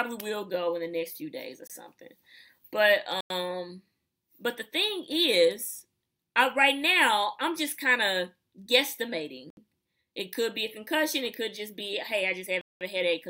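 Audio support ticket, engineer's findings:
Four dropouts to dead silence, at 1.67–1.70 s (24 ms), 3.21–3.30 s (95 ms), 9.50–9.57 s (69 ms) and 12.61–12.81 s (196 ms). Each resumes afterwards. Likely a Bluetooth stall: interference delayed packets and the headset buffer ran dry until retransmits arrived.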